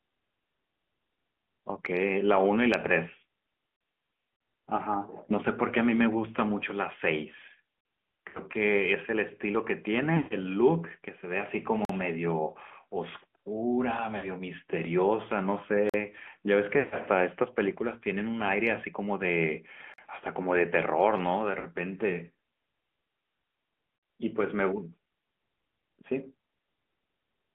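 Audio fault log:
throughout: AMR narrowband mobile codec. Speech is confined to roughly 200 Hz to 3.4 kHz with a buzzy, synthetic edge, which fits a middle-rate 10.2 kbps mode. This is a constant colouring, unlike the dropouts.
3.76, 7.81, 11.85, 15.89, 19.94 and 23.98 s: gap between chunks. These are 44 ms holes of clean silence with hard edges, one after every 4 s chunk. Nothing is missing, so the speech simply pauses and resumes.
4.34–4.40, 8.28–8.41, 10.16–10.33, 14.17–14.29, 16.79–16.96 and 21.60–21.66 s: lost AMR speech frames. At irregular moments the decoder repeats the last sound, drawing it out and fading it rather than cutting to silence. The 10.16 s and 16.79 s runs last about 120 to 140 ms and sag furthest. Speech returns briefly weak.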